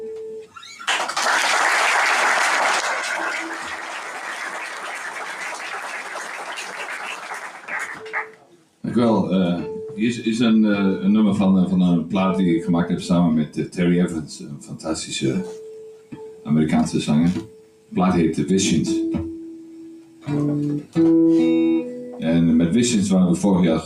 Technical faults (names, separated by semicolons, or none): noise suppressor applied to music or sounds; sound cut by the noise suppressor